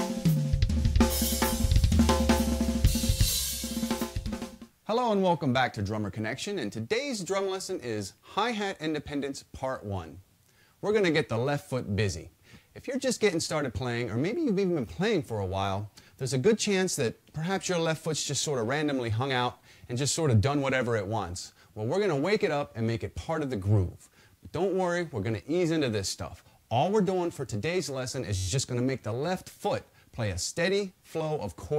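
At 28.36 to 28.48 s a system hang loop occurs: the machine froze while the output hardware kept replaying one buffer, which fits a 512-sample size. A 10.67 ms slice repeats 11 times, giving a steady buzz near 94 Hz, with almost nothing skipped.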